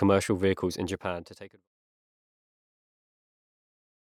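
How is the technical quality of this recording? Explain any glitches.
No glitches to report; the speech fades out smoothly from around half a second to 1.69 s, with no click or hard edge where the fade ends.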